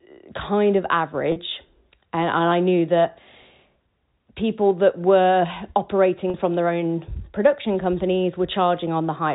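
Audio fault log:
1.32–1.36 s and 6.30–6.34 s, packet loss with pitch repetition: each gap lasts 40 ms, consistent with two 20 ms packets. The first comes just after "kind of" and the second just before "from their own production". The receiver filled each gap by looping the last pitch period, so the sound briefly holds as a slightly buzzy, frozen tone instead of dropping out. Unlike a plain dropout, there is no silent hole or click, and both losses are too short to fade to silence. The narrowband G.711 telephone sound stays the same through both.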